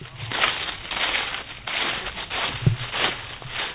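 No technical faults are audible.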